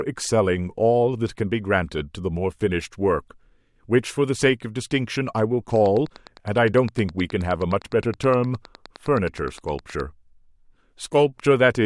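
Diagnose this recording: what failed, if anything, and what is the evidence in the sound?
Pulsed interference, likely from nearby equipment coupling into the analogue wiring or a faulty connection or power supply, produced a train of clicks from 5.76 to 10.01 s. The pulses arrive at a steady 9.7 per second, around forty in all, each much the same shape and roughly as loud as the speech itself. The result is an even ticking laid over the speech that carries straight through the pauses.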